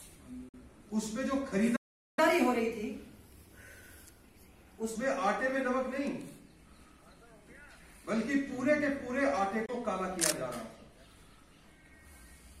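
At 0.49 to 0.54 s the audio cuts to a sudden 46 ms hole and resumes further on, as if it had kept playing. This is likely a Bluetooth dropout, where the gap fits two lost packets that never reached the headphones in time.

From 1.76 to 2.19 s the audio stops mid-flow for about 0.41 s. This is a playback stall, likely caused by the player running out of data or its thread being blocked.

From 2.19 to 4.96 s the audio runs at 1.15 times normal speed, with pitch raised by roughly two semitones. This is catch-up at higher speed, where the player resamples to work through its backlog before returning to normal.

At 9.66 to 9.69 s a shorter 23 ms hole appears, again resuming later. This is likely another Bluetooth dropout, and its length fits a single lost packet.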